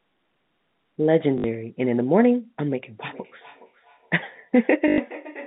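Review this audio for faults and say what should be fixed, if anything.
Packet loss with the last packet repeated shows up twice: a 60 ms stutter from 1.38 to 1.44 s and a 100 ms one from 4.88 to 4.98 s. The replayed chunk buzzes around 50 Hz, which fits 20 ms packets being repeated. A bigger jitter buffer or proper loss concealment would fix it.

Feedback echo between two devices runs from 2.99 s to the end. The sound comes back roughly every 0.4 s at about 19 dB below the speech, thinner and ringier each pass, because a second device in the room replays the call into a live mic. Muting or leaving one device stops it.

The 150 Hz to 3.7 kHz telephone band from G.711 coding can be heard underneath.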